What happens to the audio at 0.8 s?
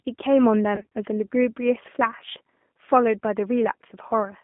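From 0.76 to 0.87 s there is VoIP packet loss concealed by the speech codec. Roughly 120 ms of audio went missing in short gaps, the longest about 30 ms, which fits a dozen or so lost 10 ms frames. The decoder filled each gap by stretching its last pitch and filter, so the sound turns into a buzzy tone or a coloured noise that fades. On a spectrogram, harmonics flatten into steady, smeared bands; the waveform shows a repetitive, decaying envelope.

Underneath, the G.729 codec is plainly audible. It rebuilds the sound from a filter, a pitch predictor and a few pulses per frame at 8 kbit/s, giving a rough, synthetic edge. A spectrogram shows nothing below 200 Hz or above 3.5 kHz, with a coarse, pulsy texture in the harmonics.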